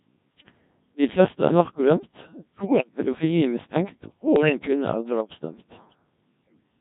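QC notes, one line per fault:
Throughout: Codec 2 vocoder at about 1.3 kbit/s, heavily damaged; speech is rebuilt from sine waves using only pitch, voicing and envelope, so it sounds robotic and buzzy.
2.58–2.89 s and 4.36–4.68 s: bit errors on digital voice radio; flipped bits corrupt whole frames' pitch, level and voicing, so the synthetic voice warbles, jumps and breaks into gibberish.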